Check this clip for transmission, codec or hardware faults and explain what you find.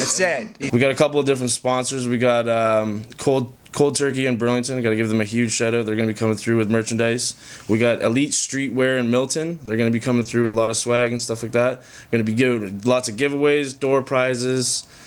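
Two transmission faults appear, both from lost packets, close together in the second half.

From 9.65 to 9.69 s there is a short concealed packet loss: about 20 ms of audio never arrived, and the decoder extended the preceding sound to cover it before blending back. It is heard as a single brief smear or wobble, isolated rather than part of a run.

From 10.19 to 11.21 s comes repeated packet loss, giving a robotic sound: seven separate gaps, the longest 80 ms, together about 220 ms, or roughly a fifth of that stretch, patched by continuing the last sound. Unlike the single blip before it, the holes follow each other closely, so the sound turns choppy, with pieces missing.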